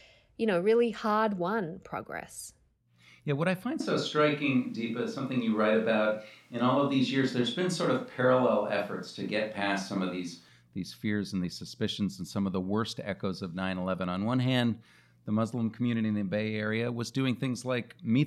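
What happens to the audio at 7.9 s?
At 7.9 s you're in a switch to a distant microphone, from about 3.8 to 10.49 s, right after "what I find": roomy, hollow, thinner bass, likely the close mic dropping out.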